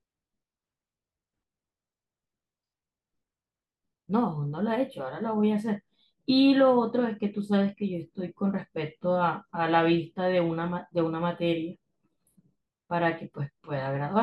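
No audible technical faults.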